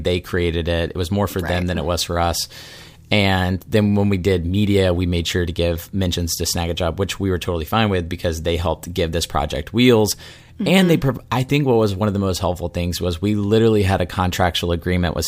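At 6.14, 10.12 and 14.10 s the speech jumps forward by a tiny amount, roughly 20 ms each time, with the two sides butted straight together and no gap of silence. The skips land about 4 s apart, and that steady spacing is the giveaway: this is most likely audio missing between chunks, where the recorder drops a sliver while closing one 4 s block and opening the next.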